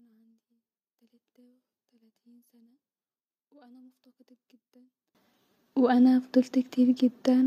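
From the start to 5.15 s the speech is almost gone: summed to mono, the level drops by about 34 dB, leaving only a faint residue. This is the signature of one channel inverted, likely a polarity flip on one side, so the centred voice and low end cancel against themselves. On a waveform that stretch is nearly flat; a spectrogram shows a pale, sparse band until 5.15 s.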